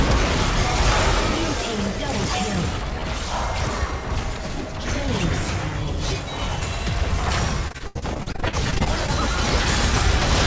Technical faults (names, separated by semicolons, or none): repeated packet loss (robotic sound)